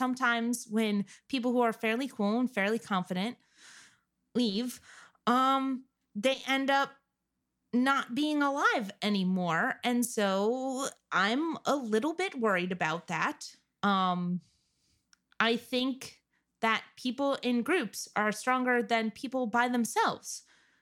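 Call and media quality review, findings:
Block size mismatch (truncated) across the whole speech clip. Steady buzz at 46.9 Hz, continuous from start to end. The buzz rate fits 1024-sample blocks at a 48 kHz stream. Probable component: buffer handoff between two processing stages. The upstream stage writes longer blocks than the downstream stage reads, and each block's tail is discarded. Playback speed is unchanged at 1.0x.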